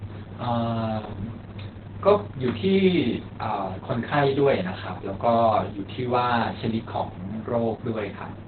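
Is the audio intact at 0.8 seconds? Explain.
No, the speech at 0.8 s sounds muffled, hoarse and slightly robotic, with nothing above 4.4 kHz throughout. This is Opus voice compression in narrowband SILK mode, consistent with roughly 8 kbps, coarsely coding the excitation.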